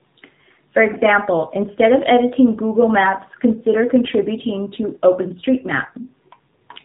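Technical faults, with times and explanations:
Throughout: AMR narrowband mobile codec. Nothing above about 3.8 kHz survives, and the speech has a plainly buzzy, synthetic edge, consistent with a rate near 7.4 kbps, where the vocal-tract model gets too few pulses per 5 ms to carry natural excitation.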